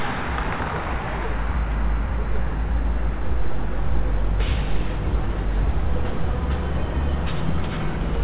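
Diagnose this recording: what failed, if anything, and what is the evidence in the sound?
Nothing failed in this recording; the sound comes through the WebRTC call path as expected, with nothing above 4 kHz, as the G.711 mu-law codec allows.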